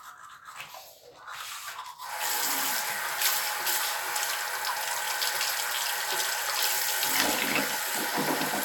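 No technical faults can be heard anywhere in the audio; the signal stays steady and intact throughout.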